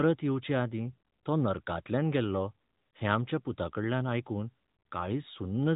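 Nothing goes wrong in this speech recording, so there's no technical fault to point to anywhere in it.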